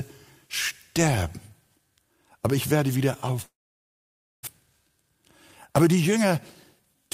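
The audio cuts out at 3.41 s. A brief buzzy continuation of the last sound fades almost at once, leaving roughly 0.9 s of silence before the sound returns at 4.49 s with about 0.6 s of material missing. This is a long network dropout, likely caused by packets arriving late or not at all. The receiver filled the gap itself and then resumed well past where it stopped, with the playout delay grown by around 400 ms. Right after that, from 4.66 to 5.26 s, the audio sounds hurried but keeps its pitch, running at 116% speed. A milder stretch follows from 5.70 to 7.09 s at 108%. This is jitter buffer speed-up. Holding more audio than it aims for after the dropout, the receiver trimmed many short pitch-period-sized slices to drain the backlog. It removed about 100 ms of material in the first stretch and about 150 ms in the second.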